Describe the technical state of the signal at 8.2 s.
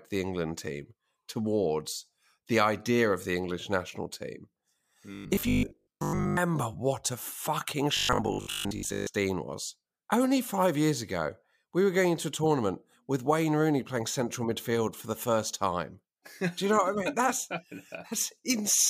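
At 8.2 s the speech has robotic sound from repeated short buffers, from 7.97 to 9.07 s, after "what a fucking" and before "was only five years". A fixed 50 Hz metallic buzz runs through the speech. This is likely a 20 ms buffer replayed repeatedly, covering most of the span.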